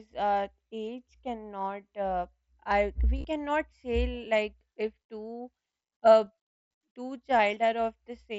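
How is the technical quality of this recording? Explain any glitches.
The recording has three brief dropouts, each covered by concealed Bluetooth headset packet loss. Under the wideband headset codec, which passes speech up to 8 kHz with a light grain, the first is a buzzy smear with a small warble from 3.18 to 3.25 s. About 45 ms of audio is missing across 60 ms, the longest gap near 22 ms. Shorter patches occur at 4.60 s and 7.39 s, the single lost frame at 7.39 s nearly hidden. Packets between headset and phone were lost, and the receiver filled each gap by repeating the closest-matching piece of the preceding waveform.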